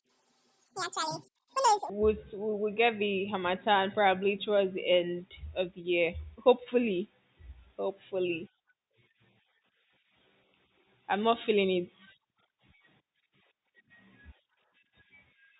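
From the start to 1.90 s the speech runs at a wrong sample rate. Audio captured at 8000 Hz is played at 16000 Hz, so it plays twice as fast and a full octave high. Because speed and pitch move together, it differs from a pitch shift that keeps the timing.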